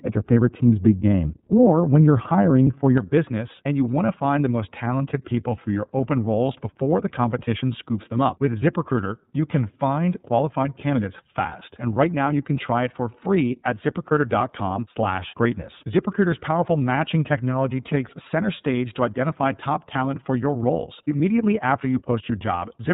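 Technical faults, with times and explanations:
Throughout: iLBC codec. The speech is band-limited to about 4 kHz and has a slightly rough, synthetic grain, which fits iLBC in its 30 ms frame mode at around 13.3 kbps. Each frame's excitation is coded independently, so the roughness stays steady rather than building up or smearing between syllables. This sets it apart from a plain low-pass filter, which narrows the band without adding this coarse texture.
0.00 to 2.98 s: de-emphasis applied wrongly. Until just before "business and you want", the highs fall away in a smooth slope, about 11 dB down at 10 kHz relative to 1 kHz. A treble cut meant to undo pre-emphasis was applied where none existed, leaving the opening dull and muffled. Unlike the codec's hard 4 kHz ceiling, this is a gradual tilt that ends abruptly when brightness returns at 2.98 s.
2.64 to 2.67 s: lost iLBC frames. A 30 ms gap, which fits a single lost frame, is filled by the decoder repeating the last pitch cycle mixed with noise, so it sounds like a brief held, faintly buzzy vowel rather than silence or a click. 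Because iLBC frames do not depend on earlier ones, the speech recovers cleanly right after, with no lingering distortion. That quick recovery distinguishes it from concealment in codecs that carry state between frames.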